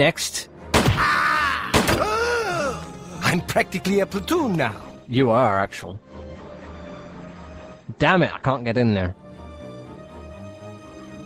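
From 4.68 s to 9.43 s there is a call bitrate drop. The call's bandwidth estimate fell and the encoder cut its bit budget, with the sound pointing to a fall from about 32 kbps to 12 kbps. The audio is coded more coarsely, and the top end closes in from 20 kHz to 8 kHz, dulling the high frequencies. The lowest-rate stretch lasts about 3.69 s. Full bandwidth returns before the clip ends.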